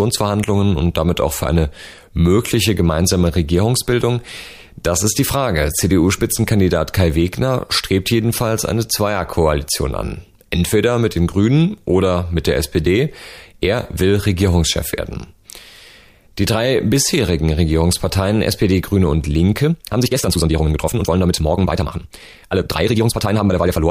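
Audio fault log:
19.61–23.90 s time-stretched section: speech abruptly runs 1.92 times faster and sounds rushed, likely squeezed by dropping short pieces. Pitch stays put, unlike a plain speed-up.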